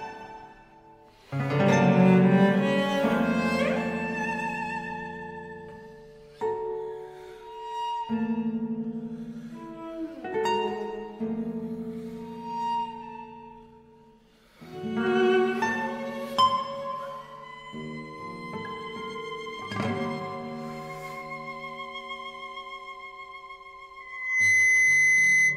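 From 24.0 s to the end at 25.6 s, a steady 2 kHz tone swells in under half a second into a squeal roughly 10 dB above the sound. This is loudspeaker feedback squeal: the microphone picked up its own loudspeaker, and at 2 kHz the loop gain exceeded one.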